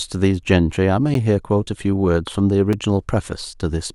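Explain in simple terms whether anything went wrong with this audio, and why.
The speech drops out twice, at 1.14 s and 2.73 s. Each is a block of digital silence that starts and ends abruptly, so it is heard as a tiny tick.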